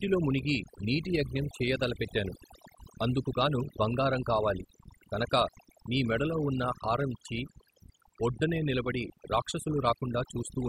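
Throughout the clip the gaps fall to near silence flecked with twinkling specks. That is overdone noise removal: a noise reducer set too aggressively shuts off individual frequency bands near its noise estimate, and quieter parts of the voice vanish with them.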